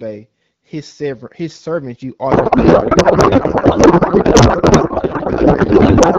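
From 2.31 s to the end, the speech gives way to garbled noise and warble that barely tracks it. This is a codec payload misread: clean AMR-WB speech at 12.65 kbit/s suddenly decodes wrongly, pointing to octet-aligned AMR frames being unpacked as bandwidth-efficient, so every field lands in the wrong place.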